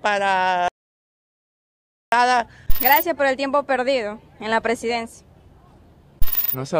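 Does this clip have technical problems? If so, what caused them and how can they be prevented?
Yes. The input was likely lost, so silence was written, giving an audio dropout to silence from 0.68 to 2.12 s: about 1.4 s of dead silence, no room tone. Securing connections and checking mute states prevents it.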